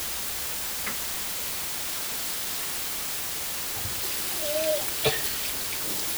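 From start to finish the audio has low bit depth with dither. The signal has been squeezed into just 4 bits, and a small random noise was added before each sample was rounded to one of those few levels. The dither turns what would have been harsh, signal-following distortion into steady white noise. At this depth the hiss is even and constant, and it sits at roughly the same level as the sound itself, so the sound has to be heard through a heavy wash of noise.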